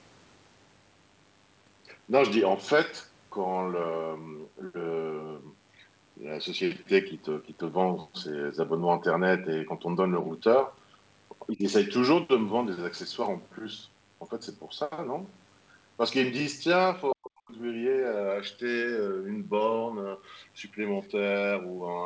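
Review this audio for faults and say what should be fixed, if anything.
Mains buzz runs through the whole clip: a steady, raspy buzz built on 50 Hz, sitting roughly 35 dB below the speech. It comes from sharp switching spikes, from a dimmer, a rectifier or an unshielded cable, entering the signal twice per mains cycle. This produces a dense ladder of 50 Hz harmonics that reaches up to several kilohertz. To prevent it, move the microphone chain away from dimmers and switching supplies, and use shielded, properly grounded cabling.

Speech suppressed in double talk appears at 11.52 to 11.65 s and again at 17.13 to 17.52 s. At 11.52 s the level dips by roughly 15 dB for about 150 ms. At 17.13 s the drop is much deeper, around 40 dB, and cuts the speech out almost completely for about 400 ms. The likely cause is both sides talking at once: the echo canceller could not tell the local talker from the loudspeaker echo and attenuated everything. 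To prevent it, use a headset or tune the echo canceller to favour near-end speech during double talk.

Other side's voice leaking through occurs at 21.02 to 21.07 s as a brief scrap of a second voice, about 35 dB below the main speech. This is likely loudspeaker playback of the far end that the echo canceller failed to remove from the microphone signal. At only 50 ms and that low a level, it is a faint residue. To prevent it, lower the loudspeaker volume or switch to headphones so less far-end sound reaches the microphone.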